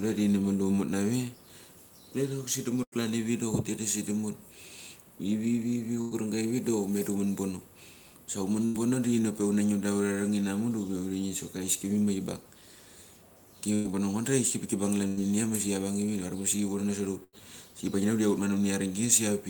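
Speech with three bursts of packet loss, at 2.83 to 2.95 s, 6.01 to 6.14 s and 8.65 to 8.79 s. Each time the receiver carried the last sound forward for roughly 85 to 100 ms and let it decay, so a voiced sound turns into a brief held buzz and an unvoiced one into a fading hiss. When the signal returns, 60 ms of real audio has been skipped, leaving a small jump in the speech. Each of these events also shifts the playout delay by about 25 to 40 ms. That backlog feeds a jitter buffer speed-up from 2.96 to 9.67 s. The receiver trims short pitch-period-length slices to drain the excess delay, running at about 101% speed and removing around a tenth of a second over the stretch. Pitch is unchanged, and the speed-up is too small to make the delivery sound hurried. From 13.75 to 17.38 s there is repeated packet loss with robotic sound. Three separate holes, the longest 95 ms, are patched by extending the preceding sound, about 8% of that span in total. 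This gives a choppy texture and drops 180 ms of speech altogether. A second jitter buffer speed-up follows from 13.88 to 19.33 s, again at about 101%, cutting roughly 70 ms to pull the buffer back toward its target after the losses.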